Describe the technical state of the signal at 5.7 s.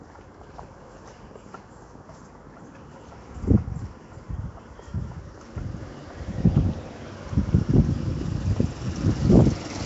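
At 5.7 s the sound is rough and hissy, with a smeared, underwater blur. Nothing is present above 7.7 kHz. This runs through the whole clip. It is likely Nellymoser compression, coding short blocks coarsely and filling weak bands with noise, which fits a bitrate near 32 kbps.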